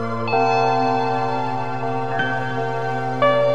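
The sound plays at twice its proper speed and an octave high throughout, a 12-semitone rise. This is audio read two samples at a time (double speed): the reader took each pair of samples as a single frame, as if the data were two-channel or twice as wide.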